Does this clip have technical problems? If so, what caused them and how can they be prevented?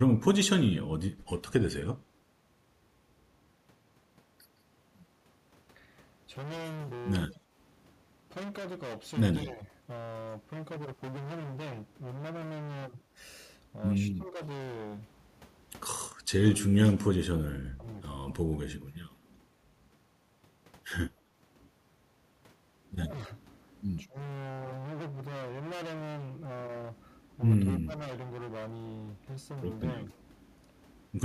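Yes. Hard clipping runs through the whole speech clip. The signal is driven about 23 dB past what one stage can pass, so roughly a fifth of the samples have their peaks cut flat. The flattened tops add high harmonics, heard as harsh fuzz on loud sounds. Set input gain lower so peaks stay below full scale.

Speech suppressed in double talk appears at 0.07 to 0.11, 7.4 to 9.61, 14.12 to 17.84, 21.15 to 24.16 and 27.81 to 28.0 s. The voice dips in brief pieces, by up to about 25 dB at worst. The likely cause is an echo canceller muting both talkers when they overlapped. A headset or a canceller with better double-talk detection prevents this.

Echo leak is heard at 7.31 to 7.36 s. A faint copy of the voice returns 169 ms late, about 30 dB below the speech. It is likely loudspeaker sound that the far end's echo canceller failed to remove. Headphones or lower loudspeaker volume at that end would prevent it.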